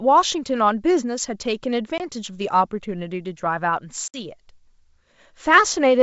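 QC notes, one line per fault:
1.98–2.01 s and 4.08–4.20 s, packet loss on an ADPCM call: two hard-edged silent holes, the first about 20 ms and the second about 60 ms, consistent with roughly one and then three lost packets. When the speech resumes after each gap, it briefly comes back with slight distortion. The missing packets were replaced with silence, which threw the decoder's adaptive predictor and step size out of step with the sender's until they re-converged over the next few tens of milliseconds. The hiss in the upper band of the G.722 wideband coding, running at 64 kbit/s, is faint throughout.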